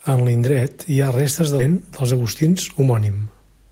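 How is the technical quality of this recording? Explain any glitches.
The recording has two timing faults close together in the speech, one abrupt and one gradual.

Skip ahead, at 1.59 to 1.61 s, right after "hi ha restes de": a stretch of about seven tenths of a second never reached playback. It was dropped either in transit or by an overflowing jitter buffer that already had later audio queued. Playback jumps straight to that later audio with no gap filled in, so the speech lurches forward and the sounds on either side of the cut are butted together.

Jitter buffer speed-up, from 1.69 to 3.64 s: just after the skip, the receiver was still holding more audio than its target delay. To drain the excess, it repeatedly trimmed out short slices one or a few pitch periods long, removing roughly a fifth of a second in total. The speech runs at about 109% of normal speed with its pitch unchanged, so the remainder of the clip sounds slightly rushed and clipped in rhythm.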